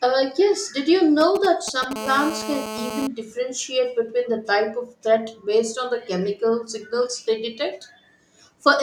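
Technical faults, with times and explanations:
1.21 to 1.93 s, GSM signalling bursts: right after "yes did you" there's a galloping dit-dit-dit of short 217 Hz buzzes, roughly 10 dB under the speech. That's a nearby 2G phone sending brief radio bursts as it sets up, which the audio circuit rectifies into sound.
1.96 to 3.07 s, GSM phone buzz: then it locks into a steady, raspy 217 Hz buzz full of harmonics, about 9 dB below the speech, ending just before "differentiate between". The phone is now in a call, transmitting 217 times a second, and the circuit is demodulating every pulse.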